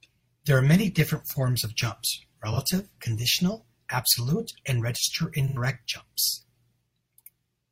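A brief smeared, noisy patch sits at 2.53 to 2.59 s, between "different forms of jumps" and "conditional absolute and", and a longer smeared patch follows at 5.48 to 5.57 s. Both are AAC frame loss with concealment: the decoder lost data and patched the gap from the last good spectrum. The first gap lasts about 43 ms, which fits one lost frame. The second lasts about 85 ms, which fits two consecutive lost frames.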